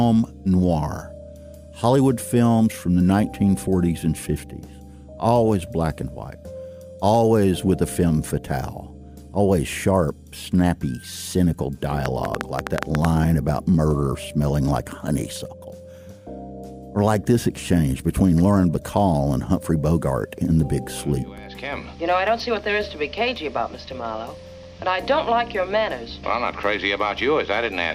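From 12.06 to 13.06 s there's a train of clicks, about nine a second at an uneven pace, roughly ten in all, popping out well above the level of the sound. Likely some nearby equipment's interference or a faulty connection or power supply injecting those same-shaped pulses.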